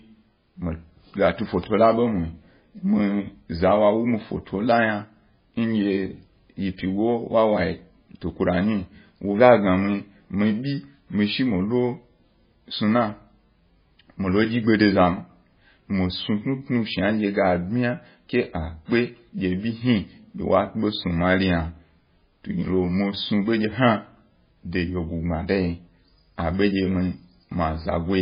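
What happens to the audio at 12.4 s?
At 12.4 s, as throughout, the speech sounds watery and muffled, with nothing above 5 kHz, likely from starved MP3 compression cutting treble and dropping weak lines.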